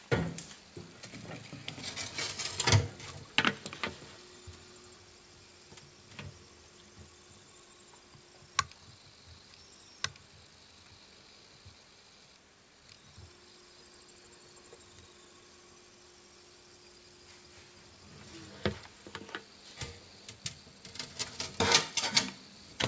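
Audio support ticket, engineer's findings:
Skip ahead at 8.00 s. Playback jumps forward with no fill and no audible gap; roughly 0.7 s of audio never plays, and the two sides are butted together. Probable component: jitter buffer, which discarded a stretch of late or overflowing audio while newer audio was already queued, cutting the built-up delay by about the same amount in one step.

Jitter buffer speed-up from 8.09 to 9.40 s. Audio runs at 114% of normal speed with pitch unchanged and sounds hurried. Probable component: the same jitter buffer, still holding more than its target depth after the skip. It repeatedly removed short pitch-period-sized slices, shedding about a fifth of a second in total. Both events pass through the G.722 call path, which has no content above 8 kHz.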